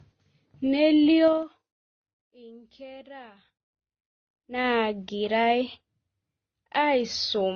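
Throughout, the speech carries layered codec artefacts, likely from transcoding between lossy codecs (AAC then Opus), with nothing above 6.8 kHz.

From 1.25 to 1.63 s, zipper noise: the level drops about 25 dB in unsmoothed 3 dB steps, roughly twenty per second, producing audible ticking.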